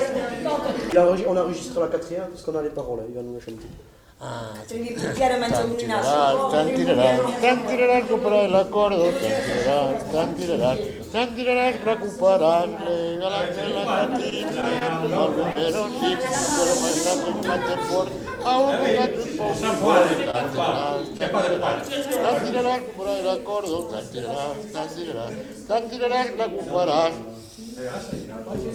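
The audio has three stretches of network damage, all from about 14 s on. From 14.30 to 15.57 s there are scattered short gaps: around four separate holes where packets were lost or arrived late, none longer than about 20 ms. The receiver bridged each one by carrying the previous sound forward, patching roughly 70 ms in all, which is a small slice of that stretch. About 40 ms of real audio is gone, so you hear brief ticks and little smears or hiccups while the sound stays mostly clear. Next, at 20.31 to 20.35 s, there's a short stall from a late packet. A packet wasn't there on time, the jitter buffer ran dry, and the receiver held the last sound for 26 ms until it showed up, then resumed exactly where it left off. Nothing is lost, but that moment is drawn out slightly, with a faint buzzy or dipped quality, and everything after it sits 26 ms later. Finally, at 21.17 to 21.21 s, there's a short concealed packet loss. 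About 20 ms never reached the decoder, and the receiver covered it with 18 ms of synthesized continuation, extending the pitch if the sound was tonal or shaped noise if not, before blending back into the real signal. It comes across as a quick smear or wobble, and anything very short in that spot can drop out.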